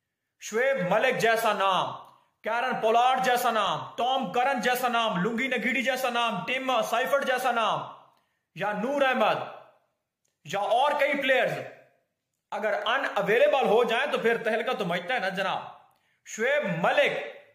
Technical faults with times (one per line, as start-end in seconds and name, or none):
12.82 overlap between stream segments